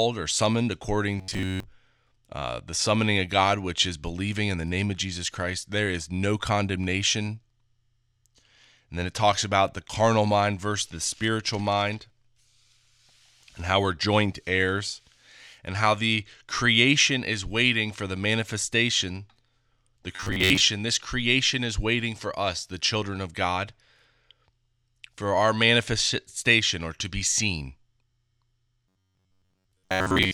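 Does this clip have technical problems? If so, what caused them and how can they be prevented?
Yes. Robotic sound from repeated short buffers: audio likely arrived too seldom, so a piece of about 10.7 ms was looped while most real sound was skipped. This produced a rigid 93.8 Hz metallic buzz at 1.19–1.68 s after "or summoned according", at 20.16–20.62 s just before "this creation is waiting", and from 28.88 s to the end. A larger playback or jitter buffer, plus steady processing and network load, keeps data from running short.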